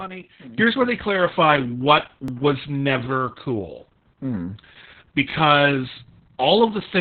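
From the start, the speech carries Opus voice compression. It sounds muffled, hoarse and slightly robotic. Nothing is heard above about 4.2 kHz, so the band is narrowband. That points to the SILK coder running at a very low rate, around 6 kbps, with 60 ms frames. At that rate the excitation is coded coarsely. The damage is heavy and lasts the whole clip.

At 0.58 s there is a sudden gain jump. The speech and the background noise rise together by about 15 dB and stay there to the end. The change happens between two samples, with no ramp. It sounds like a setting or bit shift that was likely applied at once, so the level steps up abruptly rather than swelling.

At 2.28 to 2.30 s and again at 5.30 to 5.33 s, overlapping chunks are heard. Each is a brief click or stutter. About 21 ms of sound plays twice, because the next chunk begins before the previous one ends. The joins fall 3 s apart, which fits audio handled in 3-second chunks.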